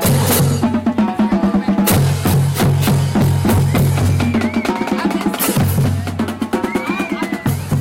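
Harsh fuzz rides on every loud moment of these sounds from start to finish: hard clipping. The signal is driven about 18 dB beyond what a stage can pass, so roughly one sample in seven is cut flat, and those flattened tops spray high harmonics.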